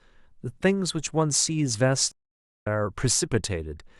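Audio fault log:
2.12–2.67 s, stream reconnect: the speech drops out for 0.54 s, then resumes about half a second further on, so a short stretch of the speech is simply skipped. The connection broke and the player fell silent while it reconnected. It then started a fresh decoder partway through a live stream rather than picking up where it stopped. The restart joins the stream at its current point, which is why the speech continues later than expected instead of carrying on seamlessly.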